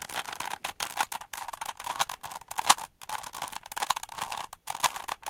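No technical faults occur at any point in these everyday sounds, so there is nothing to describe in time order.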